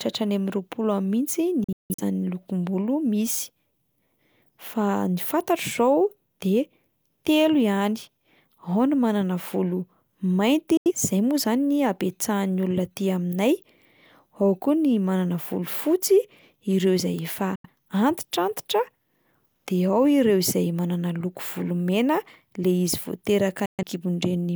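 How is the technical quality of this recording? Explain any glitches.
The speech is interrupted by four digital broadcast dropouts. The receiver stopped getting valid frames and muted, with a quick fade of about 3 ms, until good data returned. The first, from 1.64 to 2.03 s, is several short holes totalling 256 ms, the longest 171 ms. The others fall at 10.77 to 10.92 s, between "ny manana volo mainty" and "izay moa"; at 17.55 to 17.69 s, after "ireo izay efa"; and at 23.66 to 23.83 s. Each gap's length fits whole lost frames of roughly 43 ms. On a waveform these show as flat silent stretches. A spectrogram shows clean vertical black slots across all frequencies, with the sound resuming abruptly and the missing speech simply gone.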